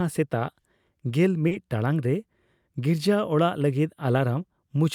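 A speech clip with one short stall from a late packet at 1.48–1.54 s, just before "ᱴᱟᱲᱟᱝ ᱨᱮ": a packet arrived late, the jitter buffer ran dry, and the receiver stretched the last sound by 30 ms with nothing lost, leaving a held sound with a slight buzz or dip. On a spectrogram the harmonics run flat and smeared, and the waveform shows repeated cycles.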